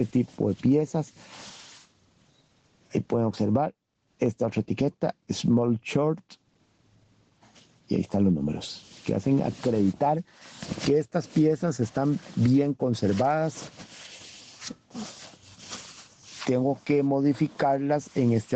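From start to finish the level breathes with gain pumping, with the level swinging by something like 25 dB. This likely comes from input gain set far too high, with a fast limiter or compressor clamping down on each loud sound and releasing in the pauses, which leaves loud and soft passages squashed close together. On a waveform the envelope looks flattened, with loud peaks pinned near one ceiling and the quiet gaps filled in. The spectrogram shows nothing above 8 kHz, which fits the call path's band limit and a low-bitrate Opus stream.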